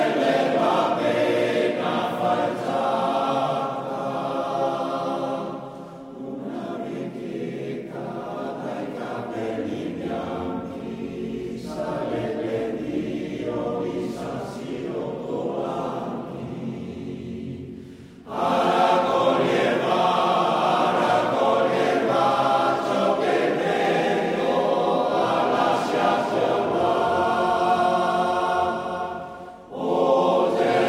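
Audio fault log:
23.85–29.49 s doubled audio track: every sound returns as a flat, full-band repeat roughly 0.4 s later, a few decibels quieter, with no decay or room colour, cutting in and out abruptly. This is likely a second, slower capture path mixed in.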